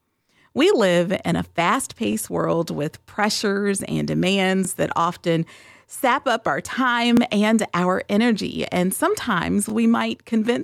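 You'll hear overlapping chunks at 2.13–2.15, 4.65–4.67, 7.17–7.20 and 9.70–9.72 s. Each 2.5 s block starts about 23 ms before the previous one ends, so that sliver plays twice at every join. It comes across as a stuttery click at a steady beat through the speech.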